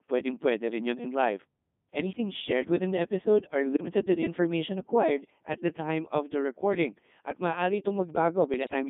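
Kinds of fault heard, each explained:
Codec 2 vocoder: throughout, the speech is rebuilt from pitch, voicing, energy and a spectral envelope at what sounds like 3.2 kbit/s, then resynthesised from sine waves inside roughly 200 Hz to 3.6 kHz, so the original waveform is gone and the voice comes out heavily robotic and buzzy.
Bit errors on digital voice radio: at 3.74 to 3.94 s and again at 8.54 to 8.73 s, corrupted bits reach this very low-rate vocoder, where each bit steers a whole frame's pitch, level, voicing or spectrum, so the synthetic voice briefly lurches and breaks into warbling, bleeping gibberish.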